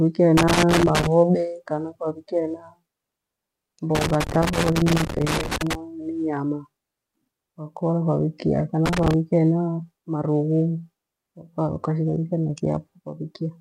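At 0.37 to 1.07 s, ending just before "kana kwavikia", then 3.95 to 5.75 s and 8.86 to 9.14 s, loose connector crackle chops the speech into irregular scratchy bursts as a dirty contact makes and breaks, showing as ragged waveform dropouts and broadband vertical spectrogram streaks.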